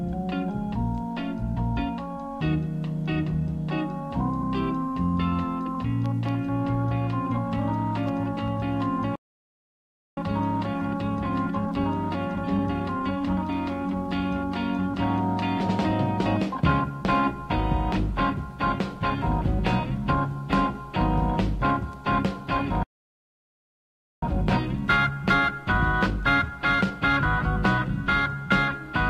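At 1.56 s, 4.41 to 4.43 s and 5.74 s the audio skips ahead by compressed frames: whole 23.2 ms frames are dropped, roughly two at the first point and one at each of the others, so about 50 ms, then 20 ms, of sound vanishes.

From 9.15 to 10.17 s a playback stall cuts the sound to silence for about 1.0 s, likely because the player ran short of data.

A time-compressed catch-up follows from 10.17 to 13.17 s, running at 1.15× speed: the audio is hurried but keeps its normal pitch.

A second playback stall runs from 22.83 to 24.23 s, about 1.4 s of silence, likely from a blocked playback thread. A catch-up at 1.1× follows to 27.18 s, and at 25.80 s, inside it, roughly two more frames, about 50 ms, are skipped.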